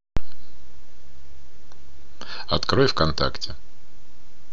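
No technical faults are audible.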